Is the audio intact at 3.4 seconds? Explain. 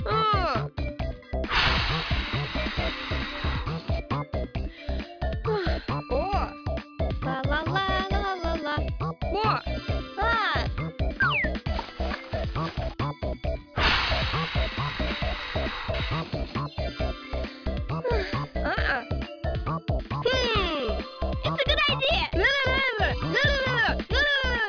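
Yes, the audio is intact at 3.4 seconds, with no dropout, click, distortion or other fault audible at that point.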